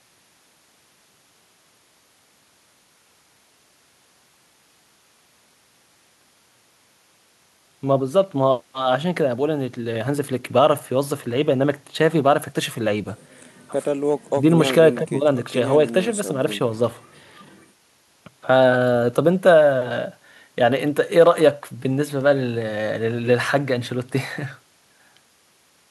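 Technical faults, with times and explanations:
No technical faults are heard in this speech clip.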